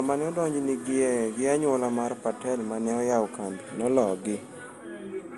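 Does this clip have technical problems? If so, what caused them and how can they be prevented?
Yes. Throughout the speech the sound is swirly, smeared and hollow, with blurred consonant attacks and nothing above about 11.9 kHz. This is generation loss, likely from around ten successive lossy encodes, consistent with MP2 at roughly 96 kbit/s. Each re-encode quantises on a shifted frame grid, so errors pile up. On a spectrogram there is a hard ceiling near 11.9 kHz, patchy holes and smeared onsets, and the waveform shows softened transients. To prevent it, keep a lossless master and encode to a lossy format only once, at the final step.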